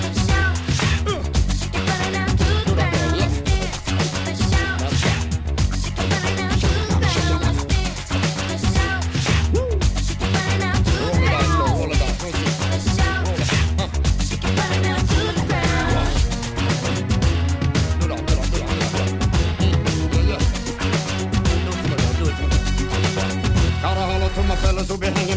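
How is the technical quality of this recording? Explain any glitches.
No glitches or faults can be heard in this recording.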